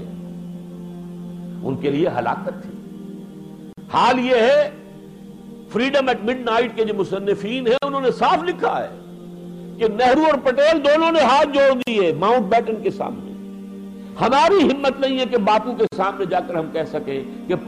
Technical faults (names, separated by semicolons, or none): gap at a join of encoded pieces